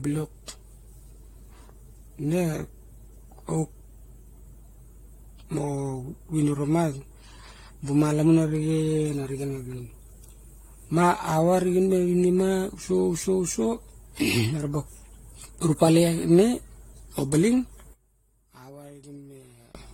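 From the start, the speech sounds swirly, smeared and hollow. Consonant attacks blur, and nothing remains above 16.6 kHz. This is likely generation loss. Repeated lossy passes, about five, fit 64 kbit/s AAC-LC, and each pass adds fresh quantisation noise and spectral holes.

From 17.93 to 19.75 s, the voice nearly disappears. It drops by about 18 dB. One channel is likely inverted in polarity. The centred voice cancels in the mono sum, leaving only the faint difference between channels.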